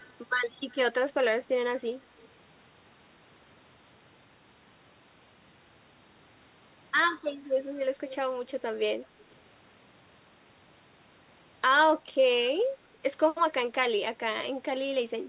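Echo leak, from 0.00 to 0.13 s and again from 8.09 to 8.15 s: a delayed copy of the speech, trailing the original by about 214 ms, surfaces briefly in each spot. At the start it sits far down, roughly 30 dB under the speech, while the second scrap is louder, roughly 15 dB under the speech. The likely cause is a loudspeaker on the far end whose echo canceller let part of its microphone pickup slip back into the call.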